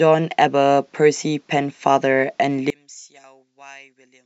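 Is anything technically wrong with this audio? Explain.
Yes. From 2.70 s to the end at 4.26 s, the speech collapses by about 28 dB, leaving a faint residue. This is most likely one channel inverted: with one side's polarity reversed, the centred voice cancels when the channels are summed to mono, and only their small differences survive. On the waveform, the amplitude drops abruptly to a sliver at 2.70 s. On a spectrogram, energy fades sharply there.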